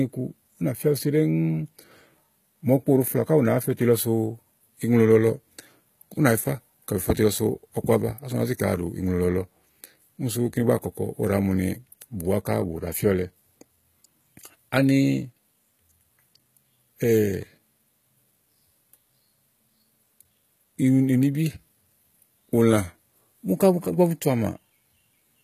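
Throughout the recording, the speech has most likely passed through HE-AAC compression at a low bitrate, around 20 kbps. Only the lower spectrum is coded, and the treble is rebuilt from copied bands, so sibilants sound gritty and metallic, with nothing above 14.9 kHz.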